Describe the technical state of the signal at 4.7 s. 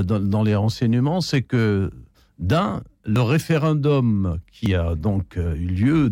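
At 4.66 s the speech jumps ahead, losing about 20 ms with no gap, likely a dropped buffer (overrun) where unread samples were overwritten.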